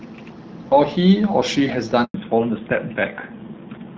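At 2.04 s the sound cuts out for 100 ms, a handover gap: while the call switched networks, no frames arrived, so it fades within milliseconds to true silence until 2.14 s. Unlike concealed packet loss, nothing is smeared or repeated to fill the hole.

From 2.14 s to the end comes a fallback to narrowband. Before the gap, the light coding sounds like HD Voice at around 12.65 kbit/s. Afterwards nothing remains above 4 kHz, and the rougher texture points to a low-rate codec near 7.4 kbit/s rather than a simple low-pass filter.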